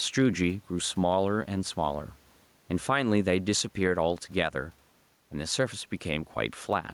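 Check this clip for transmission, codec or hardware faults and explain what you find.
There's one fault here, gain pumping, and it runs through the whole speech clip. The faint room noise sits roughly 42 dB below the speech, and the gain swings around 5 dB with the louder syllables. That's likely a fast limiter riding gain set too hot, which also squashes the speech into a flatter, compressed-sounding level.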